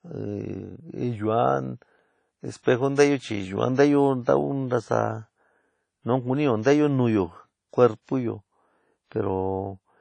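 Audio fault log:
Throughout: WMA compression, likely cause. Nothing is present above 10 kHz, and plainly audible washy, ringing hiss tracks the signal, which fits a low bitrate around 32 kbps.
2.63–2.66 s: pre-echo. A short hiss arrives about 27 ms ahead of a sharp attack, because block-wide quantisation noise spills into the quiet lead-in and softens the onset.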